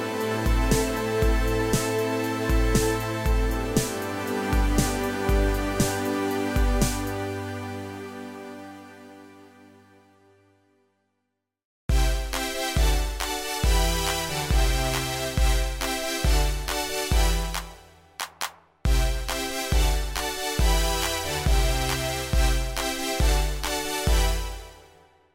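No technical faults can be heard anywhere in this audio. Nothing in the sound breaks, drops out, or shifts from one moment to the next.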